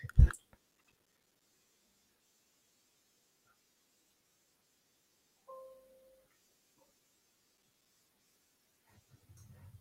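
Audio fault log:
0.72 to 1.42 s, processor overload crackle: for about 0.7 s the processor keeps missing its buffer deadlines, and each miss drops in a short stretch of silence with hard edges, about 5 ms long. Dozens of these gaps in a row make a gritty, tearing crackle over the speech. A waveform shows the signal chopped by many near-silent slivers, and a spectrogram shows thin vertical broadband lines packed across that span.
7.58 to 7.86 s, processor overload crackle: a shorter burst of the same kind. A handful of missed buffers, again consistent with buffers of roughly 5 ms, leave silent gaps with abrupt edges, heard as a brief rough crackle that ends once the load passes. On a waveform these appear as a few flat notches cut into the speech, and on a spectrogram as a small cluster of sharp vertical streaks.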